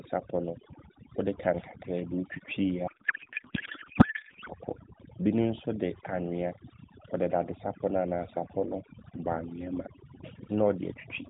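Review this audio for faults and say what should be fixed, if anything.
Overdone noise removal runs throughout: the suppressor cuts individual frequency bands whenever they approach its noise estimate, leaving near-silent, twinkling gaps in the background. Back the reduction strength off and check the result by ear before committing it.

A codec payload misread occurs from 2.88 to 4.50 s: the receiver misparses the AMR packing, so the speech turns to garbled warble barely following it, which fits octet-aligned frames read as bandwidth-efficient. Confirm that both ends negotiate the same AMR payload format during session setup.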